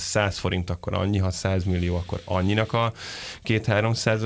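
No technical faults can be heard in this recording.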